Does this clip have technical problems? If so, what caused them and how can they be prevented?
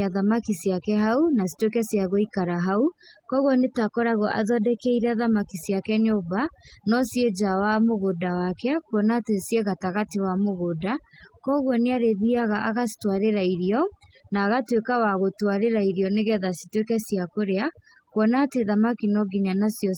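Yes. Overdone noise removal runs throughout: bands near the estimated noise floor are gated away, leaving near-silent gaps with twinkling artefacts. Prevent it by reducing the reduction depth and recording with less background noise.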